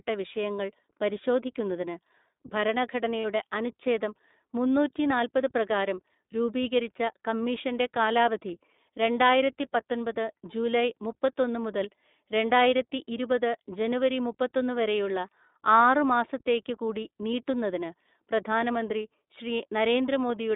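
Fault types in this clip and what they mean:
iLBC codec: Throughout the clip the speech is confined to a narrow telephone band, roughly 200 Hz to 3.7 kHz, with no air or sibilant sparkle above it, and the voice carries a plainly audible rough, slightly synthetic edge. That points to a narrowband VoIP codec, here iLBC coding each 20 ms frame on its own at a rate that fits 15.2 kbps, trading natural timbre for robustness.
lost iLBC frames: At about 3.20 s the speech briefly turns into a held, faintly buzzy vowel-like sound for roughly 50 ms before the voice snaps straight back. This is the decoder concealing about 40 ms of missing audio, consistent with two lost 20 ms frames, by repeating the last pitch cycle blended with noise. Since each iLBC frame decodes independently, recovery is immediate once packets arrive again.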